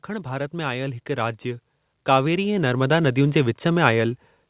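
Automatic gain rising runs from 0.07 to 4.2 s in this speech clip: the gain control, hearing a quiet input, steadily lifts voice and background together by about 14 dB. The band stops at 4 kHz, which fits a G.711 A-law call path.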